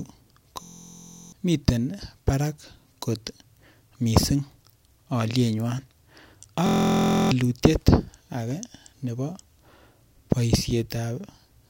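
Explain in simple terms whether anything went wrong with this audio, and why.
Something did go wrong, twice. The speech is broken by a system hang loop from 0.63 to 1.32 s, just before "miten barak kot", and again from 6.66 to 7.31 s. Each time, the computer briefly froze while the sound hardware kept replaying one tiny 23 ms slice. That slice repeats 28 to 30 times at about 43 per second, so you hear a steady buzz. That timing fits a 1024-sample buffer. Roughly seven-tenths of a second of speech is lost each time.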